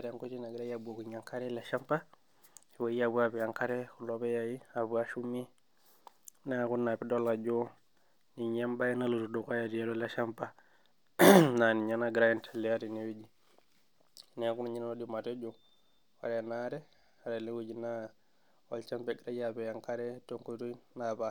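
Nothing in this speech recording stood out as a technical fault on listening.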